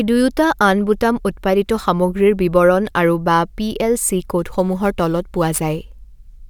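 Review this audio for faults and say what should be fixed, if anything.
From 4.39 s to the end at 6.50 s, the speech went through crude rate conversion: samples were simply repeated instead of properly resampled, which fits a 44.1 kHz to 48 kHz change with no filtering. The repeating pattern of duplicated samples produces tones unrelated to the speech, roughly 25 dB below it, heard as a gritty, inharmonic fizz riding on the louder and brighter parts of the speech. Resample with a proper band-limited converter rather than nearest-sample repetition.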